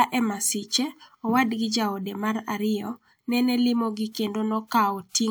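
No technical faults are audible.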